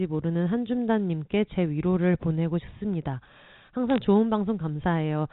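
A short burst of sharp ticks and crackle sits on top of the speech between 3.90 and 3.98 s, while the words underneath carry on unchanged. These are bit errors on a digital phone line. On the G.711 A-law path, each flipped bit corrupts a single 8-bit sample, and a hit on the sign or a high-order bit throws that sample far off, producing a click. The density fits an error rate of around a fifth of a percent across a few damaged frames.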